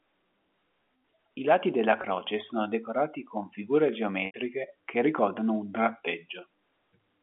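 Packet loss with pitch repetition hits at 2.02–2.04 s, a brief buzzy hold, and again at 4.26–4.34 s, where about 80 ms goes missing (likely four 20 ms packets), so the repeated pitch period fades to silence before the speech cross-fades back in over the narrowband G.711 line.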